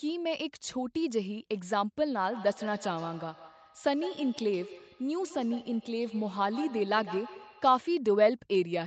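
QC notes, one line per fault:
2.32 to 7.83 s, feedback echo between two devices: the speech keeps coming back around every 150 ms, peaking at about 15 dB under the direct voice. A second device's speaker is feeding this mic, and its echo canceller only knows its own playback.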